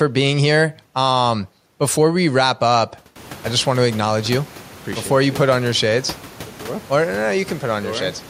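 No technical faults can be heard in the speech. The background noise of the room rises by about 21 dB around three seconds in and then sits about 21 dB below the speech, which is part of the recording itself.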